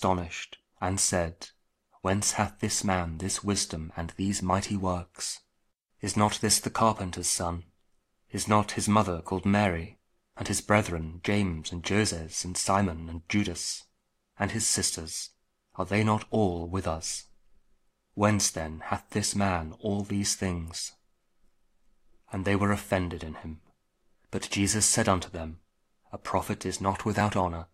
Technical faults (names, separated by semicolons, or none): overlap between stream segments